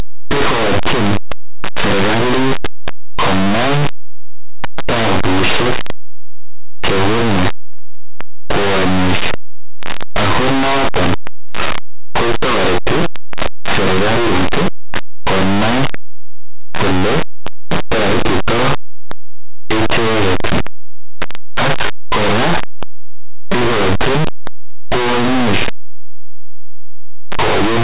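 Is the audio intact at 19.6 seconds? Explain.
No. At 19.6 s, as throughout the clip, the speech suffers from linear audio read as companded: plain linear 8-bit samples are being expanded as mu-law codes. Small values just to one side of zero become the loudest outputs, producing very loud, harsh distortion.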